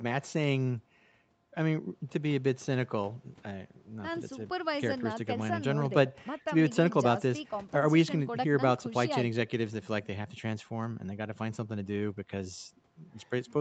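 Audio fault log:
No faults heard in this speech recording.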